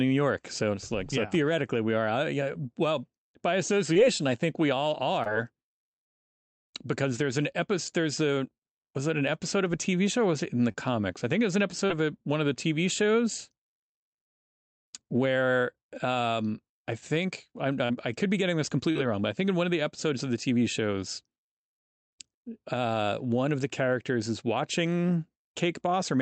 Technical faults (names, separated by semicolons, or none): short concealed packet loss